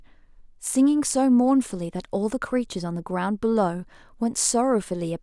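No technical faults are audible.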